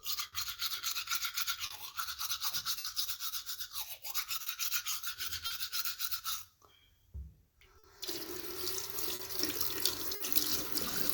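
It's a clip of everyday sounds, and there's clock drift between sender and receiver running the whole way through: the sending end's clock is slow, roughly four percent behind, so the receiver's buffer keeps running short and it has to pad things out to keep playback going. That shows up as small timing hiccups scattered unevenly across the clip rather than in one spot. From 0.27 to 5.52 s there are scattered short gaps, about five of them. The longest is around 70 ms, and all told roughly 200 ms gets patched. That's the signature of packets arriving late or not at all, with the receiver smoothing over each hole by carrying the last bit of sound forward, so the gaps come through as brief ticks, little smears or short dropouts. Between 6.45 and 7.43 s come the repeated timing corrections, where the receiver stretches playback to 97% speed and slips in about 40 ms of extra material to stay in step with that slow sender. 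It's subtle, more a slightly wobbly tempo than a clear glitch. Then from 7.78 to 10.22 s there's another patch of scattered short gaps, about three this time, the longest around 50 ms and roughly 150 ms concealed in total, heard again as quick hiccups where the receiver papered over missing packets.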